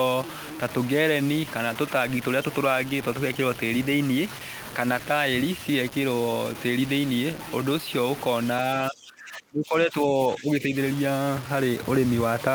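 From the start and throughout, the speech carries grainy distortion that rises and falls with the voice, sitting roughly 15 dB below the signal. Quiet syllables turn gritty and fade-outs sputter between steps, unlike steady hiss. This is likely low bit depth without dither, with truncation to something like 5 bits.

From 8.9 to 10.75 s, the voice dips by up to about 20 dB, over roughly a second and a half in total. The likely cause is speech suppressed in double talk: the echo canceller turned the talker down while the far side spoke. Unlike packet-loss dropouts, the sound ducks rather than falling to clean silent gaps.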